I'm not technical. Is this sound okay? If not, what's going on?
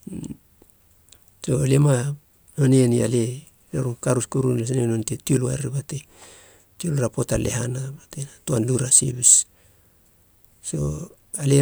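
Yes, listening through this speech recording, nothing stood out as a problem.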